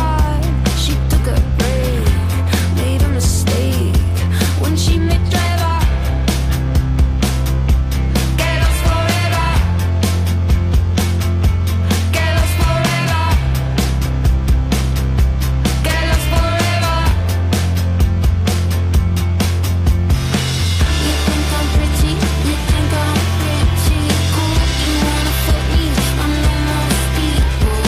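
No technical faults can be heard anywhere in the audio; the signal stays continuous and stable throughout.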